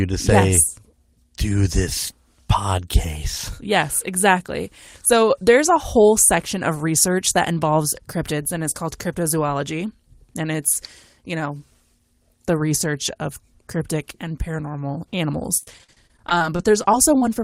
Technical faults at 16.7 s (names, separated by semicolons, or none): repeated packet loss (robotic sound)